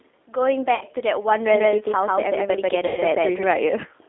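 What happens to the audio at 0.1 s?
G.729 codec coloring is present at 0.1 s and persists through the whole clip. The speech is rebuilt from a vocal-tract filter, pitch predictor and a few pulses per frame, which fits an 8 kbit/s stream, leaving plainly rough, synthetic speech confined to about 250 Hz to 3.6 kHz.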